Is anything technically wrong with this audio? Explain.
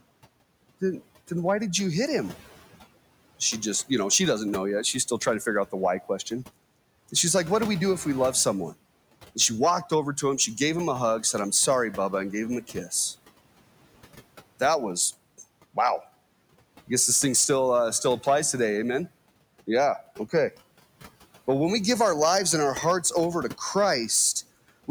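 Yes, two faults run through the whole speech clip.

Hard clipping is present throughout. The signal is driven about 7 dB past what one stage can pass, so its peaks are sliced flat on a small fraction of samples, under one percent. That adds high harmonics, heard as crackle on loud syllables. Because it sits only on peaks rather than thickening every sound, it points to flat-topped overload, not soft saturation.

Noise suppressor artifacts are also present throughout. The suppressor pulls steady noise down by about 18 dB, band by band, so the room noise, about 20 dB below the speech, drops away in pauses and returns beneath speech. Because that residue moves with the speech, it comes from processing, not the room.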